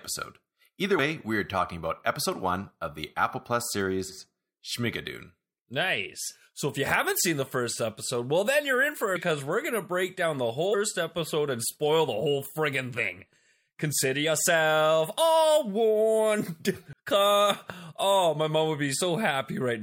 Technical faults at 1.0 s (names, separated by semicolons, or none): damaged data in a compressed stream